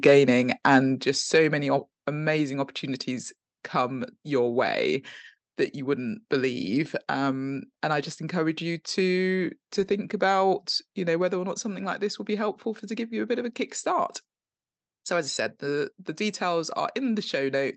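In this speech recording, at 1.02 s the whole sound, voice and background together, drops suddenly by about 5 dB in a single step, just before "just so many", and stays at the lower level. The likely cause is a microphone volume step-down: the call software judged the input too hot and lowered the device's capture gain in one move. The audio also passed through a call codec, with the top end stopping at about 8 kHz, which fits Opus at a modest call bitrate.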